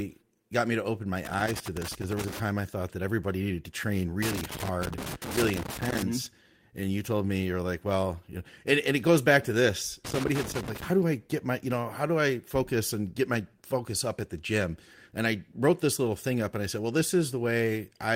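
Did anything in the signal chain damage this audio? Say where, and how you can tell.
Yes, in the analogue wiring: a worn or dirty contact was making and breaking as the cable moved, giving loose connector crackle. Each time the connection opens, the speech is chopped, and any DC on the line lands as a pop. The irregular scratchy bursts run from 1.25 to 2.40 s, ending just before "I thought that everybody"; from 4.23 to 6.03 s, after "everybody needed to train"; and from 10.05 to 10.84 s, between "goes back to this" and "do i get my".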